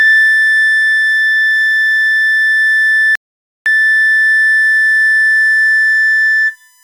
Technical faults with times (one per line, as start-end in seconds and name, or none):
0.00-6.83 USB whine
3.15-3.66 rebuffering stall